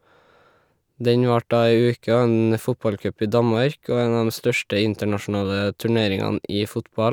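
No technical faults can be heard anywhere in the recording.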